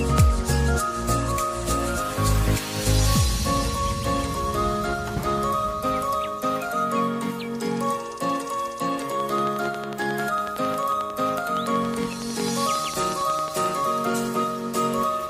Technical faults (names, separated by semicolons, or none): train of clicks